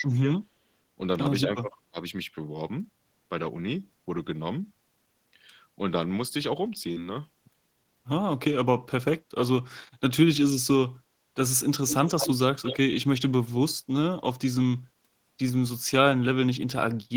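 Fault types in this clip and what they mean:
Speech suppressed in double talk: the speech dips by around 20 dB in brief patches near 0.0 to 0.37 s and 1.43 to 1.97 s, likely an echo canceller muting overlapping talk.
Echo leak: a copy of the speech returns 220 ms late, roughly 5 to 10 dB below it, at 11.88 s and 12.63 s, likely loudspeaker pickup the canceller missed.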